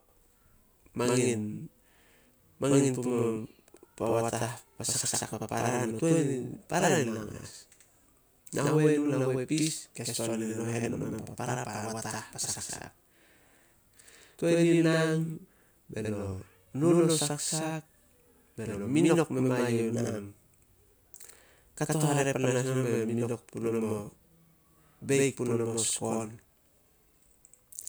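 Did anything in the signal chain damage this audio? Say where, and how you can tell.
Yes, at the driver or buffer stage: a channel delay (doubling) runs throughout, with every syllable slapped back about 85 ms later, which fits one channel lagging a 4096-sample buffer before the mono sum.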